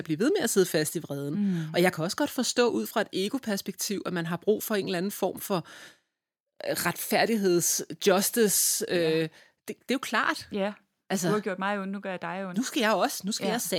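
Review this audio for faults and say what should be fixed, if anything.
At 7.62 s the whole speech signal, voice and background together, drops in level in a single small step of about 1 dB, a slight but sudden drop rather than a gradual fade. This is a microphone volume stepped down event, likely the call software judging the input too hot and lowering the device's capture volume in one move, so everything after that point sits a notch quieter. To prevent it, set the microphone input level with headroom beforehand and disable the application's automatic microphone level adjustment.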